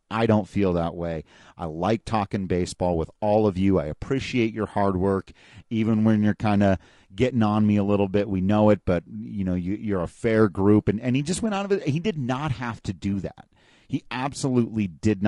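From start to finish the speech has a rough, grainy edge, with a hiss-like fuzz filling the gaps between the harmonics and a top end that sounds thin and a bit synthetic. That's most likely low-delay AAC compression, the AAC-ELD kind used on video calls. Its short frames can't pin down pitch harmonics cleanly and burn extra bits doing it, and the damage here is plainly audible, which fits a modest rate of around 32 kbps.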